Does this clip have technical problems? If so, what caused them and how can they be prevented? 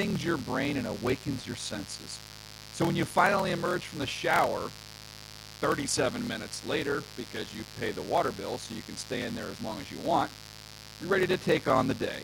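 Yes. Mains buzz runs throughout: switching spikes at twice the 60 Hz mains cycle add a raspy harmonic buzz, roughly 15 dB below the speech. Prevent it with shielded, properly grounded cabling kept away from dimmers and rectifiers.

A padded block size mismatch also runs throughout: short blocks are zero-filled, producing a 38.3 Hz buzz and slowing the speech to 0.889 times normal speed at about normal pitch, which fits 1024-sample writes. Prevent it by matching block sizes between adjacent processing stages.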